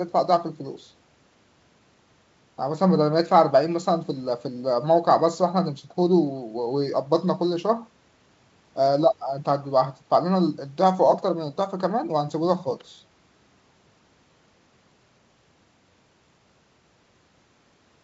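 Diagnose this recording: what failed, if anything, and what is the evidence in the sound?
Nothing failed here: the speech comes across as ordinary G.722 wideband telephone audio at 64 kbit/s, reaching up to about 7 kHz, with at most a faint trace of the coding in the upper band.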